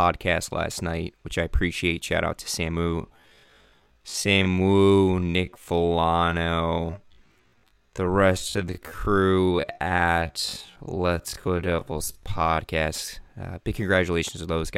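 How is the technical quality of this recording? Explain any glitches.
The recording has one clear fault, a time-stretched section from 2.96 to 12.58 s, right after "out to". Software likely stretched this stretch of speech to half speed, repeating short slices to hold the pitch, so the pace drops abruptly and the speech drags.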